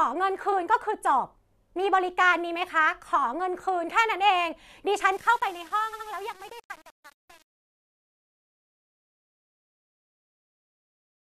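Repeated frames at 0.51 to 0.54 s: a 23.2 ms block of the speech is played twice, so the same sliver of sound restarts and a brief stutter is heard. This fits a single compressed frame being written or sent again, which makes the clip about 23 ms longer.

Truncation distortion on a fade runs from 5.12 s to the end at 11.23 s. The smooth fade-out that begins around 5 s and runs to the end is computed with too few bits and no dither, which points to about 7-bit resolution. As the level drops toward the smallest step, the waveform collapses into coarse square steps. The quiet tail sounds gritty rather than dissolving evenly.

Repeated frames return at 5.92 to 6.06 s, inside the fading section. Here a 69.7 ms block plays three times in a row, adding about 139 ms. The result is a longer stammer.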